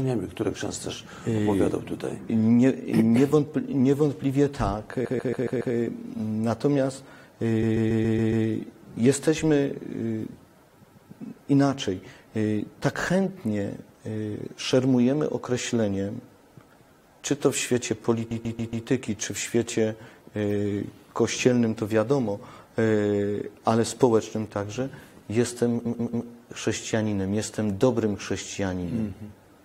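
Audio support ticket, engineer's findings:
Repeated frames, five stutter events: 5.04–5.74 s, 7.62–8.45 s, 10.82–11.10 s, 18.30–18.86 s, 25.85–26.26 s. The same 139.3 ms block replays 2 to 6 extra times per event, so the sound loops before moving on. This fits a six-frame block written or sent more than once upstream of the decoder, most likely in the stream sender or file writer. It adds 0.28 to 0.84 s per event, about 2.8 s in total.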